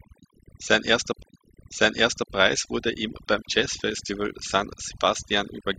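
Overdone noise removal is present for the whole length of the speech. The noise reduction was set too aggressively, so frequency bands sitting near its noise estimate are pushed far down or cut off entirely, and the quieter components of the voice are removed along with the noise. The result is a background close to silence, broken by twinkling specks where isolated bands flicker on and off.

At 1.23 s there is a CD skip. The laser was knocked or hit a flaw and jumped to a different turn of the disc's spiral, so playback briefly mutes and then resumes from another point. It is heard as a sudden discontinuity in the speech, with a very short gap of silence before the voice carries on from a different place.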